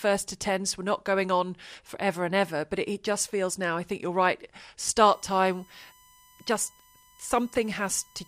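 From 5.13 s until the end of the speech, a steady, thin whine sits underneath, fixed in pitch at 1 kHz and about 30 dB below the speech level. This is USB whine: the USB bus pulls current in 1 ms frames, and that thousand-per-second ripple leaks into the audio path through shared power or ground wiring, surfacing as a constant tone at exactly the frame rate.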